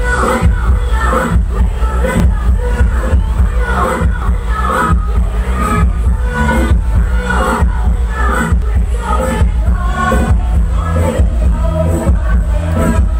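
At 2.2, 4.22, 8.62 and 10.2 s the audio jumps abruptly forward, and about 20 ms of sound is missing each time. No gap of silence fills the space. The material on either side is butted together. This points to a dropped buffer (overrun), likely caused by the capture program falling behind so the hardware overwrote a block of samples before it was read, leaving a hard splice.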